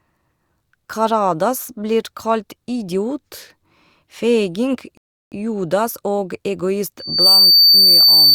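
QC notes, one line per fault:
4.97 to 5.32 s, rebuffering stall: the speech drops abruptly into silence and then picks up exactly where it left off, with nothing skipped, so the gap simply stretches the clip by about 0.34 s. The player exhausted its store of downloaded audio and had to halt until more data arrived. That is why the pause lands at an arbitrary point in the speech and the resumed audio joins seamlessly rather than jumping ahead.
6.99 to 8.35 s, loudspeaker feedback squeal: a piercing single tone near 4.6 kHz rises out of the speech, swelling to full strength within roughly a third of a second and then sitting well above the speech, around 10 dB louder, until the clip ends. A microphone was picking up the loudspeaker it was driving, and at that one frequency the loop gain exceeded unity. Each pass around the loop made the tone louder, so it built on its own into a howl.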